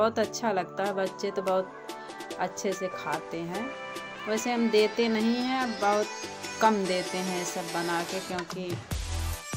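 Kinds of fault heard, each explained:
No technical fault can be heard anywhere in the signal, with no dropouts, clicks, distortion or level problems at any point.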